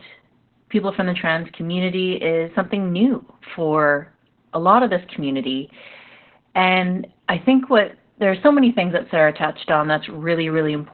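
Heavy Opus voice compression runs through the whole speech clip: the codec stays in SILK linear-prediction mode at narrowband, consistent with roughly 8 kbps, so nothing survives above 4.3 kHz and the coarse excitation leaves the speech muffled, hoarse and slightly robotic throughout.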